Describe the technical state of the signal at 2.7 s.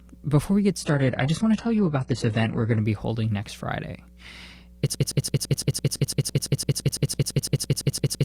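At 2.7 s the speech is in a stretch of adaptive stream at a lower bitrate, running from 0.81 s to 2.81 s. The connection slowed, so the player switched to a leaner version of the stream. Nothing is heard above 11.1 kHz. The treble sounds thin and synthetic, which fits a low-rate codec with artificial high-band rebuilding. Artefacts rise. Quality drops suddenly at the start of the stretch and returns at the end, with no gap.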